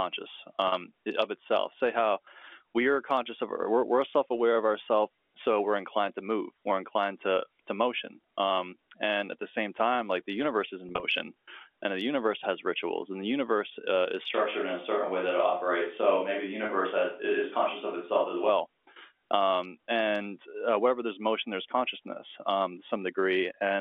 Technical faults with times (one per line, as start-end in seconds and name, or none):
0.68-0.72 packet loss with pitch repetition
10.89-11.03 packet loss with pitch repetition
14.34-18.49 switch to a distant microphone
16.66-16.69 packet loss with pitch repetition